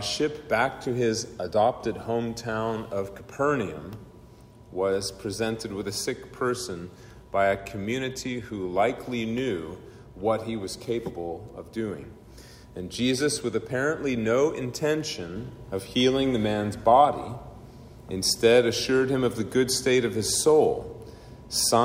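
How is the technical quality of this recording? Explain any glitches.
There is one clear glitch. A sudden gain jump occurs at 15.36 s: the level rises by about 4 dB from one sample to the next and stays there until the end of the clip. The likely cause is a digital gain setting applied instantly instead of being ramped in. Because the change is applied to the whole signal, the sound and its background noise step up together, so the noise floor audibly shifts along with everything else.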